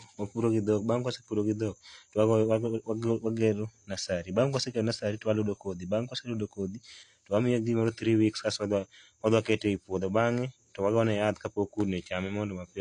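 Throughout the recording, the speech has likely been through AAC compression at a low bitrate, which fits AAC-LC running at about 32 kbps. With so few bits per frame, the encoder discards the top of the spectrum and coarsely quantises what remains. Nothing is heard above about 9.8 kHz, so the voice sounds dull and closed-in, and the damage is plainly audible as a smeared, warbling texture, with fizz on sibilants.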